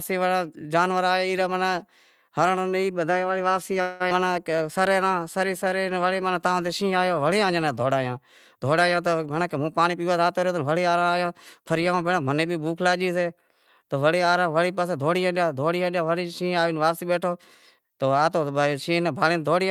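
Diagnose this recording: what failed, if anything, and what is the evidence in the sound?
From 3.81 to 4.02 s the speech stops advancing and the last sound is drawn out as a fading buzz or hiss for about 190 ms, then resumes where it left off. This call audio freeze is likely a network stall that emptied the jitter buffer, so the receiver extended the last sound.

At 4.10 to 4.13 s the speech jumps forward with almost no gap, and about 150 ms of audio is gone, with the two sides joined nearly directly. This is a skip ahead at the network or jitter buffer stage, where the stretch was dropped while later packets were already waiting.

From 4.21 to 5.81 s the speech plays slower at the same pitch, at 92% speed, with drawn-out sounds. This is a jitter buffer slow-down: the receiver repeated single pitch periods over and over, adding 138 ms to rebuild its reserve after the disruption.

From 8.90 to 11.19 s the speech sounds hurried, running at 108% speed with pitch unchanged. 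This is a jitter buffer speed-up: holding more audio than its target, the receiver cut short pitch-period pieces in quick succession, removing about 200 ms to lower the delay.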